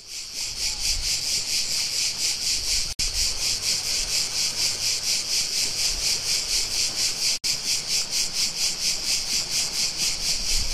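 Digital broadcast dropouts occur at 2.93 to 3.00 s and 7.38 to 7.44 s. Each time the receiver muted the everyday sound for about 64 ms, which fits two failed frames, before good frames returned. Whatever was sent during each gap is simply missing.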